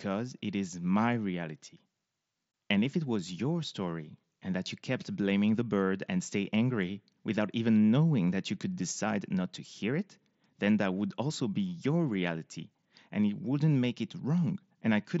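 No faults detected; the speech carries the wideband Bluetooth mSBC headset codec's usual 8 kHz ceiling and its light coding texture, with no dropouts, clicks or level disturbances at any point.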